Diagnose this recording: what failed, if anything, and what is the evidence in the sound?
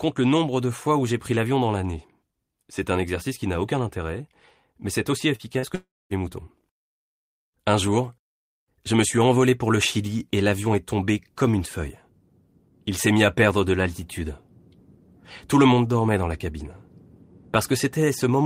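Short concealed packet loss at 5.35–5.42 s and 5.59–5.66 s, both just after "intérêt mais c'est aussi", is a network fault. Each time about 40 ms of speech failed to arrive, and the decoder extended the preceding sound to fill it, leaving a brief smear before normal audio resumes.

A long network dropout follows at 5.75–6.13 s. The last sound is stretched into a fading buzz or hiss, then about 0.23 s of silence, and speech returns with roughly 0.36 s missing. The likely cause is a network stall long enough to exhaust the decoder's concealment.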